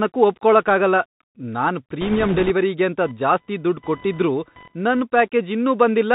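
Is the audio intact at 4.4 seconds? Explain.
No. Computer activity noise runs from 3.02 to 5.02 s, covering 4.4 s. Processor, graphics or mouse load shifts the ground shared with the audio circuit, and those swings leak into the signal as a chirping, scratchy buzz with a pulse rate of around 1 kHz, sitting roughly 30 dB below the speech. It follows the computer's activity rather than the speech, so it starts and stops independently of what is being said.

The Bluetooth CVSD headset codec also affects 4.4 s, as it does the whole clip. The encoder sends a single up-or-down bit per sample and adapts its step size, which fits a 64 kbps CVSD link. Nothing above 4 kHz gets through, so the speech sounds narrow and muffled. Loud high-frequency sounds outpace the step and distort, s sounds turn scratchy, and a grainy hiss lies beneath everything.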